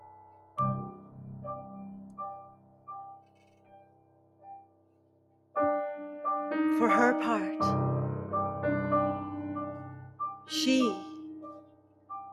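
A noise suppressor built for speech was left on for this non-speech audio, treating steady tones, ambience and decays as noise. Its gain swings by around 20 dB, so attacks pass while sustained parts and tails sink, giving a pumping, thinned sound throughout. In places the noise suppressor turned the sound down harder: 0.0 to 0.57 s (about 13 dB down), 0.94 to 1.18 s (about 9 dB), 2.42 to 2.88 s (about 14 dB), the longest stretch from 3.15 to 5.55 s (about 14 dB), and 11.53 to 12.1 s (about 14 dB), where held material fades away or decays are clipped short.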